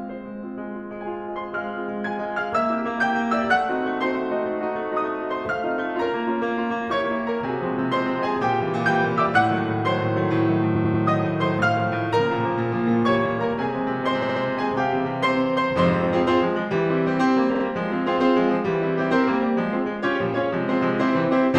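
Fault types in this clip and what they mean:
Repeated frames: blocks of about 93, 70 and 46 ms of the music replay in a stutter, lengthening the track rather than leaving gaps as dropouts would.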